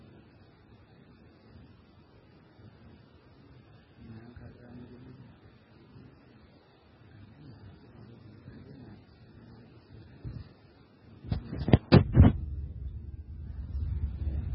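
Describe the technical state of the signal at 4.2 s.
At 4.2 s the speech carries heavy damage that runs through the whole clip and is most likely MP3 compression. Nothing survives above 5.5 kHz, and the remaining band sounds watery and swirly, with s sounds turning metallic and consonant onsets smeared. Unlike a plain low-pass filter, which would only dull the treble, the weak spectral lines here switch on and off from frame to frame, which fits an encoder starved at roughly 16 kbps.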